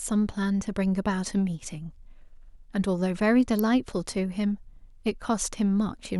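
At 3.59 s a sharp snap cuts across the speech, peaking around -15 dBFS: an electrical switching spike, likely from a nearby switch or motor arcing into the audio line. The waveform shows a needle-thin spike, and the spectrogram a narrow vertical stripe spanning all frequencies.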